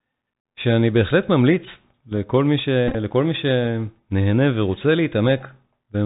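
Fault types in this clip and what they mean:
Bluetooth CVSD headset codec: the speech is carried as one up-or-down bit per sample with an adapting step, so nothing passes above 4 kHz, sibilants turn scratchy, loud high sounds distort, and a granular hiss sits underneath. A spectrogram shows a hard ceiling at 4 kHz with grainy noise filling the band.
Bluetooth headset packet repeated: between 2.88 and 2.95 s, lost voice packets, about 45 ms in all, were filled by decoding the previous packet again. The runs are short, around 15 ms at most, so repeats every 3.75 ms give brief buzzy ticks, seen as repeating waveform blocks and harmonics near 267 Hz.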